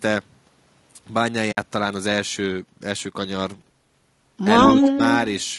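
Throughout the clip the speech has a rough, grainy texture, with noise filling the gaps between harmonics and a dull, synthetic-sounding top band. This is likely low-delay AAC compression (AAC-ELD) at a low bitrate, around 32 kbps. The short frames resolve pitch poorly, which separates it from broadband noise added before encoding.

From 1.51 to 1.58 s there is AAC frame loss with muting. The sound fades out and back in over a 60 ms gap, which fits about three lost frames zeroed by the decoder. The overlapping windows give the hole soft edges, unlike a hard dropout.

From 4.65 to 4.99 s the speech is suppressed in double talk. The level dips by about 5 dB over roughly a third of a second. The likely cause is an echo canceller turning the talker down while the far side speaks. That makes it a dip in level rather than a gap.

Overlapping that, from 4.79 to 5.18 s, an echo leak brings back a delayed copy of the speech about 131 ms behind it. 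The copy is only a little quieter than the direct sound. A second, very faint scrap returns at 5.40 to 5.44 s with the same 131 ms delay. The fixed delay points to loudspeaker pickup, not room reverberation.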